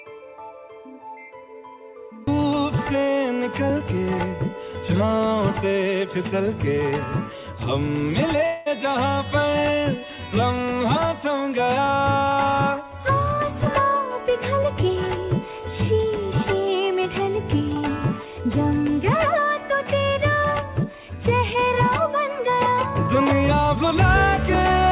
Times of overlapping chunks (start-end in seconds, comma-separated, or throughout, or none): none